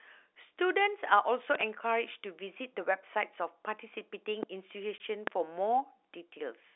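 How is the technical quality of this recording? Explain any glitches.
The recording has two kinds of glitch: loud pops and one short dropout. It sits in the narrow G.711 telephone band, roughly 300 Hz to 3.7 kHz.

Loud pops occur three times. At 1.55 to 1.63 s there are two in quick succession, peaking about 15 dB above the speech. Single pops follow at 4.43 to 4.45 s and 5.27 to 5.30 s, each about 20 dB up. A sudden voltage step was likely added, from a plug, switch, static or driver glitch. The speech continues beneath each sharp thump.

Packet loss filled with silence appears at 4.98 to 5.00 s. The 20 ms gap fits a single lost packet. The receiver played silence in its place. The speech drops out abruptly, with hard edges.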